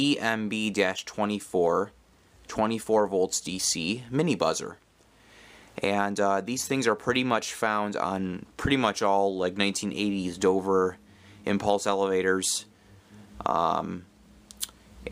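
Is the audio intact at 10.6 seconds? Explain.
Yes, at 10.6 seconds the audio is intact, with no dropout, click, distortion or other fault at that moment.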